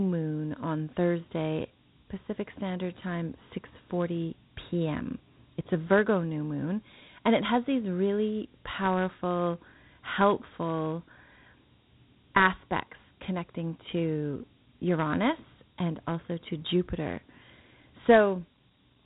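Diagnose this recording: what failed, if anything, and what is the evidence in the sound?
Dialogic VOX ADPCM throughout, a codec-stage fault: nothing above 3.9 kHz and plainly audible gritty hiss trailing the speech, which fits 4-bit OKI ADPCM at 32 kbps.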